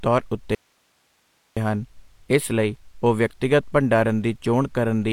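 At 0.55 s the speech cuts out abruptly. This is an audio dropout to a faint residue. For about 1.02 s, until 1.57 s, the wanted signal is gone. Only hiss remains in the gap, around 45 dB below the speech. The break is sudden at both ends, not a pause or a fade. The path after the break was likely still live while the signal feeding it was lost.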